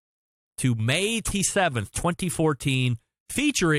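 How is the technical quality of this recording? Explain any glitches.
There's one glitch worth flagging in this speech recording. At about 1.30 s you get a quick blip from damaged data in the compressed stream. Some of the data went bad, so the decoder misread that frame and briefly lost sync while hunting for the next valid header. What you hear is a short glitch that lasts only a moment.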